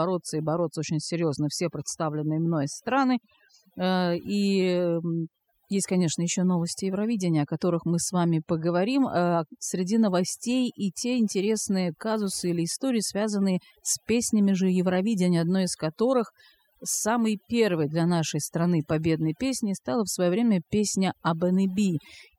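From start to finish, the background sits at near silence broken by twinkling specks, and the voice has its quieter details hollowed out. This is overdone noise removal: a noise reduction stage was pushed too hard on a noisy recording, so any frequency band hovering close to its noise estimate gets pulled far down or shut off entirely, taking the softer parts of the speech along with the noise.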